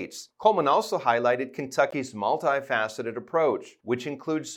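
At 1.91 s the sound drops to silence, and it returns at 1.94 s. The dead gap itself lasts about 18 ms, a brief hole that reads as a tiny stutter. This is a Bluetooth stall, likely caused by radio interference delaying packets. The headphones' buffer emptied before the resent data arrived, so output went quiet for that moment and then carried on once the backlog was delivered.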